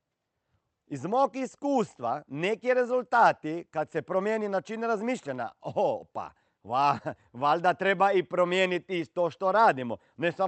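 No technical faults can be heard in the speech, which comes through the call path with the band-limited, coded character of a call codec, its upper frequencies ending at about 8 kHz.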